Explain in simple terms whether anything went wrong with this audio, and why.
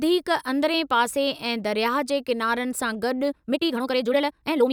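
Something does go wrong near the end. Right after "किनारनि सां", at about 3.23 s, the speech suddenly speeds up to roughly twice its pace and stays that way to the end, while the pitch doesn't rise at all. That's a time-stretched section, here squeezed rather than stretched. Software likely shortened that stretch to fit a length, dropping short slices to keep the pitch steady, which is why it sounds rushed.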